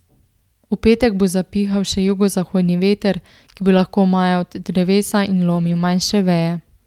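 At 2.07 to 2.09 s, just after "petek bo zapihal še", a lost packet is rebuilt from error correction. The next packet carried a rough low-bitrate copy, so nothing drops out. The speech turns briefly grainy. The same happens at 3.77 to 3.79 s. A longer rough patch follows around 5.55 to 5.81 s.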